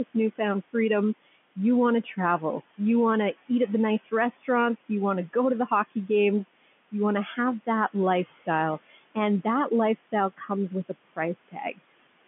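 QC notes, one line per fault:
Throughout: noise suppressor artifacts. The suppressor pulls what it judges to be steady background down by about 16 dB frame by frame, so the room noise dips in pauses and swells under speech.
0.05–2.15 s: speech cut by the noise suppressor. Before "you want to eat", brief stretches totalling about a third of a second lose quiet consonants and endings, dropping up to about 20 dB. The waveform shows them as collapsed envelope tails, and the spectrogram shows missing high-frequency fricative energy within the telephone band.
3.99–12.27 s: speech cut by the noise suppressor. After "to eat at the", soft sounds are repeatedly misread as noise and attenuated up to about 21 dB, about a second and a half in total. They sound swallowed, appearing as abrupt gaps and thinned formant traces on the spectrogram.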